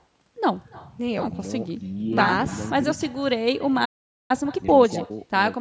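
Echo with no canceller runs through the whole clip. The far end is evidently playing the call over a loudspeaker, and its microphone feeds that sound straight back without any echo cancellation removing it. Every phrase is shadowed by a faint copy arriving roughly 300 ms later, sitting about 22 dB below the direct speech. Because it has crossed a room and a second microphone, that copy sounds thinner.

A playback stall starts at 3.85 s and lasts until 4.31 s, cutting the speech off mid-flow with about 446 ms of silence. The player has likely run short of incoming data or had its output thread held up. With nothing to play, the output simply drops out until audio arrives again.

Time-compressed catch-up follows directly, from 4.31 s to 5.19 s. Having fallen behind during the stall, the player works through its backlog by cutting out short slices and cross-fading the remaining pieces together. 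This runs the speech at 1.5 times normal speed while leaving its pitch unchanged, so it sounds hurried but not chipmunk-like. The call's microphone processing is also audible in the missing lowest bass, which its high-pass filter removes as normal.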